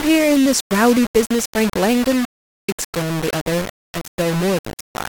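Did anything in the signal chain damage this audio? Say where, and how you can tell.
Yes. The whole clip of speech has a coarse, grainy distortion riding right on top of it, with the noise only about 10 dB below the signal, and it swells and shrinks with the level instead of sitting steady like hiss. Quiet tails go gritty or sputter out. That's low bit depth without dither, likely from a sample-format conversion that rounded everything down to about 4 bits, so the error tracks the waveform.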